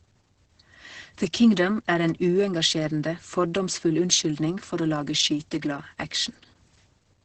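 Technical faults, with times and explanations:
Throughout: Opus voice compression. The speech sounds muffled, hoarse and slightly robotic, which points to a low bitrate near 10 kbps in the SILK linear-prediction mode. The band is cut at 8 kHz, and the coarsely coded excitation roughens the pitch. A spectrogram shows a flat ceiling at 8 kHz with blurred, grainy harmonics that shift in steps consistent with 20 ms frames. The waveform looks smoothed, with the transient detail lost.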